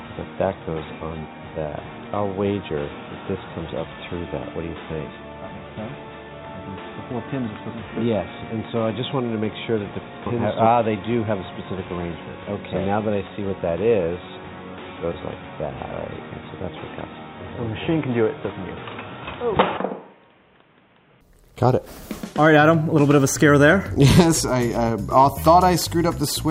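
From the start until 21.21 s the audio was most likely captured through an input switched to a poorer device, such as a lower-grade microphone or a headset call profile, before the better input takes over with no gap. Over that stretch nothing reaches above 3.8 kHz, so the sound is dull and boxy. It sits roughly 5 dB quieter, over a faint background noise of its own. At 21.21 s it abruptly opens up, brighter and louder.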